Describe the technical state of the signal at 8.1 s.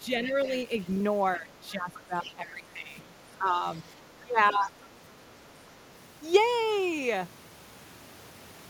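At 8.1 s the speech signal is intact, with no audible technical fault at that moment.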